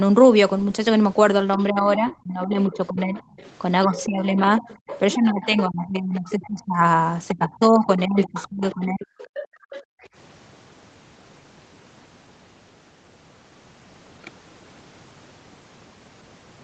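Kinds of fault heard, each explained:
Other side's voice leaking through, 1.54–4.05, 4.59–5.62, 6.29–6.48 and 8.24–10.07 s: a fainter second voice sits roughly 15 to 20 dB under the speech, likely loudspeaker echo the canceller missed.
Speech suppressed in double talk, 1.7–3.17 and 3.87–9.09 s: the speech dips by up to around 20–25 dB while the other voice overlaps, likely the canceller attenuating both together.
Background gated by the echo canceller, 9.48–10.02 s: room sound drops by about 40 dB for under half a second as the microphone is clamped, then returns.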